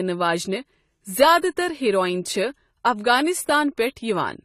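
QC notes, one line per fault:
throughout, AAC compression: the speech sounds dull and smeared, with a fizzy, warbling edge on sibilants and nothing above 14 kHz. The likely cause is AAC-LC coding at a low bitrate, fitting about 32 kbps, which cuts the top band and starves remaining detail.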